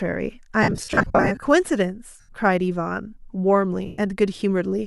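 Lost LE Audio frames break up the speech three times. From 0.63 to 1.42 s, about 510 ms of audio drops out in short runs of around 50 ms at most. The decoder fills each gap by reusing the last spectrum with scrambled signs, so the speech turns into a grainy, noisy smear. Shorter single gaps of 82.5 ms at 2.20 to 2.29 s and 120 ms at 3.86 to 3.98 s smear the same way.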